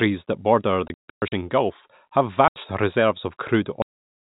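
Between 0.88 and 1.32 s, packet loss filled with silence punches hard-edged holes into the speech, about 300 ms missing in total, the longest run 120 ms. A shorter 80 ms hole follows at 2.48 s. The gaps are dead digital silence rather than smeared or repeated audio, and their lengths are multiples of 20 ms, which fits 20 ms packets. At 3.82 s comes a cut-off end: the speech stops mid-sound and drops straight to digital silence with no natural decay. Unlike a fade-out or a speaker pausing, the sound is simply severed while still going. The narrow, telephone-band G.711 coding stays audible throughout.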